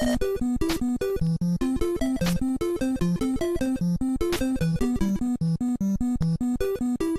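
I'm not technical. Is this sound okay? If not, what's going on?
No. MP2 compression damage runs through the whole clip: it sounds dull, with a gurgling, grainy edge. That is likely from heavy MPEG Layer II encoding, which divides sound into narrow bands and, short of data, shuts off the upper ones and roughly approximates the rest.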